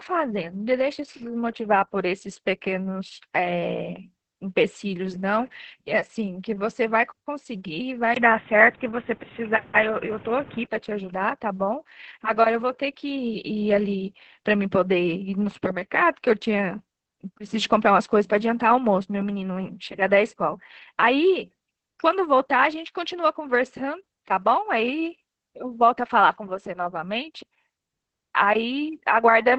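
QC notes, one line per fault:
Throughout: Opus voice compression. The speech is running through Opus in its SILK voice mode at 10 kbps, which is a pretty starved rate. It's holding on to wideband, so there's content up to about 8 kHz, but the excitation is coded very coarsely in 20 ms frames. That's why the voice comes across hoarse and a bit robotic and the detail is smeared, and the damage stays heavy for the whole clip.
8.14 to 10.68 s: input switched to a poorer device. There's a brief dropout of about 20 ms at 8.14 s, and then the sound goes dull and boxy. Nothing gets through above 3.8 kHz, the level shifts by roughly 5 dB, and a new noise floor comes in around 30 dB under the speech. Everything recovers at 10.68 s. The likely cause is the system flipping over to a narrower-band mic or a headset call profile and then switching back.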